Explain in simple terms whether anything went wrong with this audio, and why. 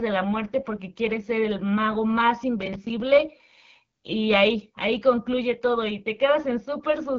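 Yes, something went wrong: from start to finish the speech sounds rough and raspy, with a gritty, buzzy edge, and it lacks the airy crispness of a clean recording. That is damage from the AMR wideband (HD Voice) codec, the phone-network system for HD calls. It was squeezed to one of its lowest quality settings, so the voice is rebuilt from a simplified model of the throat and mouth. Nothing sits above about 6.9 kHz, which removes the finest sparkle.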